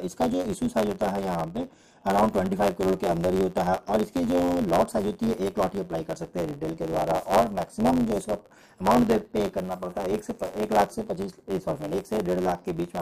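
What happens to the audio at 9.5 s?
At 9.5 s, as throughout, a block size mismatch (truncated) drops each block's tail, fitting 512-sample writes, causing a 91.9 Hz buzz and 1.07× speed with the timbre kept.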